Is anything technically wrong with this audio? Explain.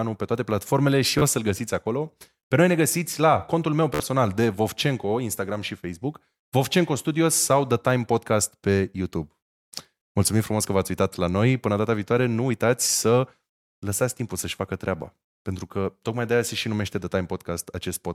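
Yes. Bluetooth stutter occurs at 1.19 to 1.22 s, after "pe toate platformele și", and at 3.94 to 4.00 s, after "găsiți la contul meu". Late or lost packets made the receiver replay its last buffer, roughly 27 and 53 ms of audio, heard as a brief buzzing stutter before speech jumps ahead. A waveform shows short identical repeated cycles, and a spectrogram shows vertical striping.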